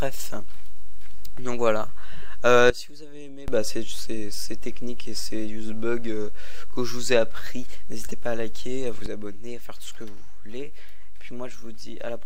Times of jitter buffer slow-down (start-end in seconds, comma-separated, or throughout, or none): none